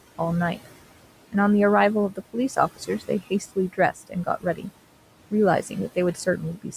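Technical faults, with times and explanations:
Throughout, noise suppressor artifacts: the room noise, about 16 dB below the speech, is pulled down by about 18 dB in the pauses and returns under the voice.
2.12–2.36 s, 2.76–3.10 s, 3.73–4.67 s and 6.14–6.74 s, speech cut by the noise suppressor: low-level parts of the speech were treated as noise and attenuated by about 16 to 18 dB. About a tenth of a second is lost in each early span and a few tenths in the later ones, so soft consonants and word endings sound swallowed or faint.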